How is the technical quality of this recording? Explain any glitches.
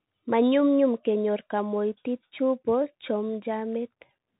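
Technical quality is poor throughout, limited by a Bluetooth CVSD headset codec. From start to finish the speech is band-limited, with nothing above about 3.8 kHz, which fits a 64 kbps one-bit delta coder whose adaptive step can't keep up with loud, fast changes. The s sounds turn scratchy and a granular hiss sits underneath. A spectrogram shows an abrupt empty ceiling near 3.8 kHz, and the waveform looks staircased and grainy.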